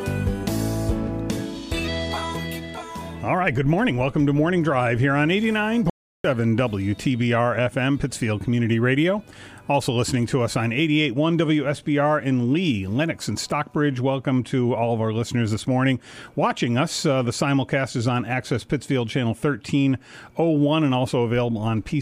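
At 5.90 s the sound cuts out mid-flow. It returns at 6.24 s. That is an audio dropout to silence lasting about 0.35 s. The gap is silent, with no room tone. The input was likely lost briefly while recording continued.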